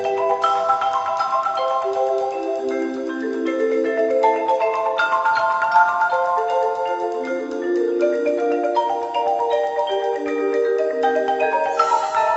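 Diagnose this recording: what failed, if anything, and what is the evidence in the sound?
Nothing stood out on listening; the top end stops at about 8 kHz and the lowest bass is trimmed, both normal for the call microphone processing the sound passed through.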